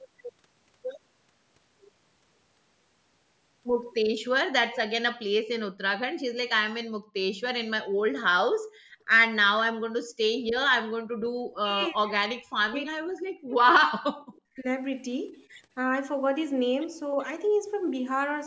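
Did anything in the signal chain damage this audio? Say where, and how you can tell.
Yes. Speech suppressed in double talk at 6.65–6.72 s and 11.4–14.66 s, in the call processing: speech drops by around 40 dB, likely an echo canceller ducking everything while both sides spoke.

Background gated by the echo canceller at 7.0–7.15, 8.58–9.07, 10.06–10.18 and 11.0–11.12 s: room sound dips by about 24–34 dB while far-end playback triggers suppression.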